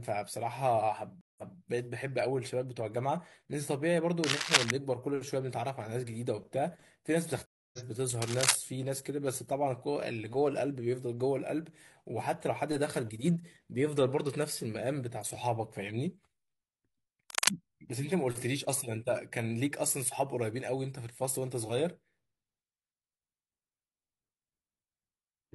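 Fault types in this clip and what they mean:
Stream reconnect: the connection drops, playback falls silent, and a new decoder picks the stream up mid-flow, so the speech resumes from a different point. At 1.21 s the gap lasts 164 ms and the audio comes back about 232 ms earlier, repeating a short stretch as the server resends a burst. At 7.46 s a 273 ms gap is followed by a jump forward of roughly 300 ms, skipping material.
Cable scratch noise: dense, irregular bursts of scratching and rustling sit over the speech for a moment, consistent with rapidly changing contact resistance in a worn cable, connector or control that is being moved, which is the likely cause. Bursts occur at 4.24 to 4.71 s and 17.30 to 17.50 s at roughly 5 dB above the signal, and at 8.22 to 8.55 s at about the same level as the signal.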